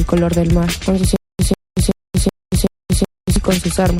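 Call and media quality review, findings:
Corrupt frame decoded at 0.76 s and 2.6 s: short glitches, the first faint and confined to about one frame, the second much louder and spanning a couple of frames. Decoder played damaged frames as-is, so flipped bits put energy at the wrong frequencies.

Stutter with silent gaps from 1.16 s to 3.36 s: a 146 ms fragment repeats six times on an even 377 ms cycle, each followed by 231 ms of dead digital silence. Likely the player or stream stalling, replaying its last buffer on each retry, then running dry. The audio for that stretch is gone.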